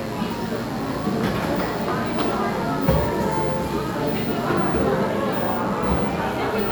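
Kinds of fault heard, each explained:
Mains buzz: a steady, raspy buzz sits under the sound for the whole clip, roughly 20 dB below it. Sharp switching spikes repeat twice per 50 Hz cycle, so harmonics climb to several kHz, unlike smooth hum, which stays near 50 or 100 Hz.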